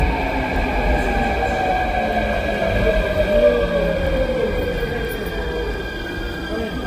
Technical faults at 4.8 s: transcoding between lossy codecs

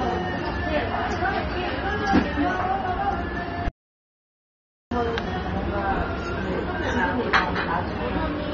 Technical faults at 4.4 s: AAC compression; playback stall

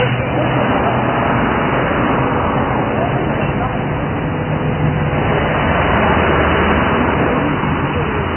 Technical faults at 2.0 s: Vorbis compression

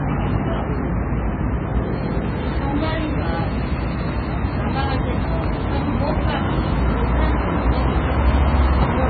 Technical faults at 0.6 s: MP3 compression

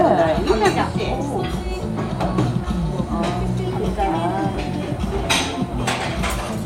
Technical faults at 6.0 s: none

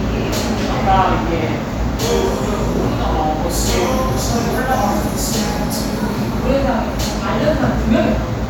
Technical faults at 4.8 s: none

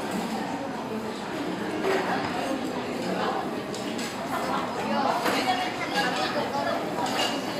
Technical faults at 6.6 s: train of clicks

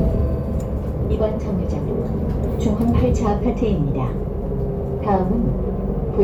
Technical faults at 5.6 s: none

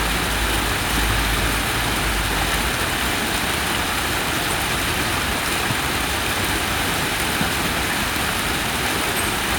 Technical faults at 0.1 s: none

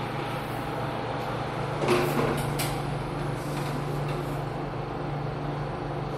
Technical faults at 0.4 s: none

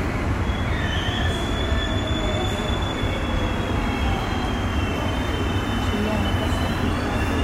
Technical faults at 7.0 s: none

